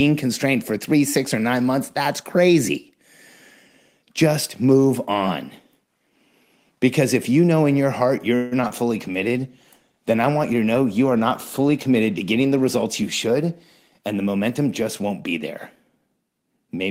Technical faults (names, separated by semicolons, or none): call audio freeze; short concealed packet loss; call bitrate drop; jitter buffer speed-up